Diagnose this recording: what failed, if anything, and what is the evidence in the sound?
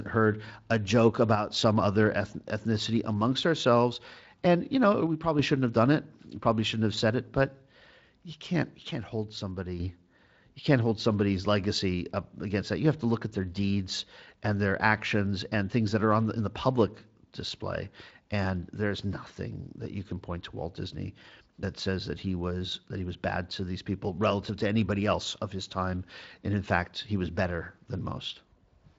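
The speech level drops abruptly by about 6 dB at 1.35–1.51 s, 5.07–5.39 s and 8.91–9.80 s. The waveform envelope steps down and back, and the spectrogram dims evenly up to its 7.6 kHz Speex ceiling. This is likely one channel dropping out, halving the mono sum.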